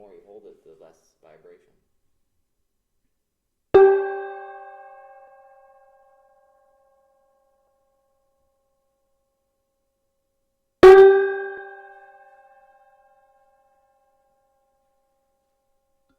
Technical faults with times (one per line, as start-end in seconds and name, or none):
5.27 compressed frames skipped
7.67 compressed frames skipped
11.57 compressed frames skipped